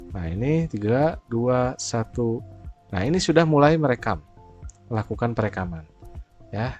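Nothing stood out as a fault on listening.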